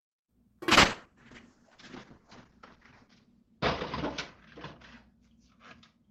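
From 0.72 s to the end, a call bitrate drop from 48 to 8 kbps forces coarser coding, cutting bandwidth from 20 to 8 kHz; the sound turns muffled and rough.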